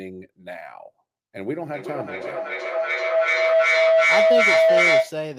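From 1.7 to 5.26 s a tone near 700 Hz swells to about 11 dB above the speech, pulsing around every 400 ms. This is feedback howl: a microphone-to-loudspeaker loop gaining level on each pass.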